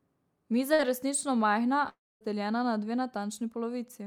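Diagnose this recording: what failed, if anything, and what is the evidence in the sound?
Network stage. At 0.73 to 0.81 s, just before "je resnično majhna", there is a burst of packet loss. The receiver's concealment carries the last sound forward for about 54 ms while turning it down, so it smears into a short fading continuation. The speech then resumes with about 60 ms missing. A buffer underrun would give a hard click or a clean silent hole. Here the gap is filled with a decaying continuation, and it is too short to reach silence.

Network stage again, with a longer outage. Between "je resnično majhna" and "na dve", from 1.89 to 2.23 s, nothing usable arrives for about a third of a second. Concealment stretches the last sound briefly, but it fades out and leaves roughly 240 ms of plain silence. Speech returns at "na dve" with about 320 ms lost. The silent stretch after the concealment fades is what separates this from the short burst at 0.73 s and points to a long network dropout as the likely cause.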